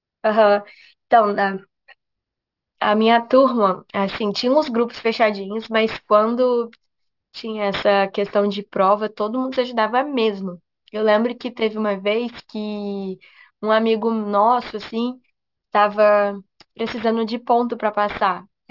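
A speech clip with aliasing throughout. Energy above 6 kHz has folded back down into the audible band. That points to a drop to about 12 kHz sampling with no anti-alias filter. Sibilants sound gritty and metallic. The folded content sits roughly 20 dB below the speech.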